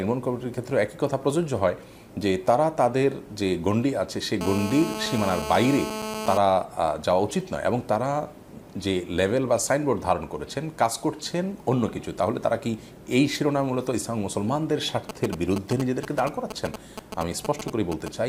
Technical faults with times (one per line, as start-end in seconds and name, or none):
4.41-6.38 GSM phone buzz
15.09-18.08 GSM signalling bursts